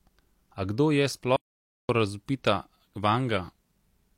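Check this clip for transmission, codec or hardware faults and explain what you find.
One fault is present in this speech clip. An audio dropout to silence runs from 1.36 to 1.89 s: the speech cuts off mid-flow and about 0.53 s is replaced by dead silence with no room tone, most likely because the input connection was lost briefly while recording continued.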